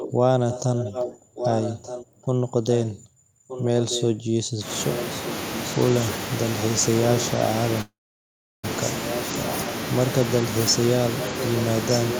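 From 0.00 to 0.12 s, 0.49 to 2.26 s, 2.70 to 3.02 s, 3.47 to 4.17 s, 4.91 to 5.72 s and 11.19 to 12.20 s, an echo leak repeats the speech about 1.22 s late. It sits about 10 dB below the speech, nearer 5 dB in the second stretch. This is likely a far-end echo canceller letting loudspeaker pickup through. On a spectrogram it appears as a fainter duplicate of the harmonic patterns, shifted right.

From 7.81 to 8.65 s, a call audio freeze holds the last sound briefly and then drops to near-silence for about 0.71 s. Speech then resumes where it stopped, 0.82 s later, with nothing lost. Packets were likely delayed until the jitter buffer emptied. The waveform shows a flat gap.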